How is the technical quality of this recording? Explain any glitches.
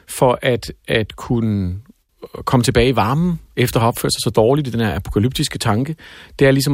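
No technical glitches can be heard anywhere in the recording; the speech signal stays steady and intact throughout.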